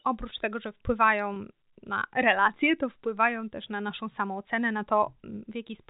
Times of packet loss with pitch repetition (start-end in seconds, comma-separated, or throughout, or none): 1.34-1.36